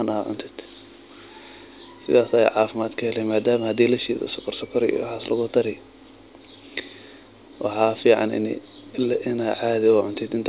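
There are no technical faults to describe in time order in this speech, which comes through a G.711 mu-law call path at 64 kbps with nothing above 4 kHz.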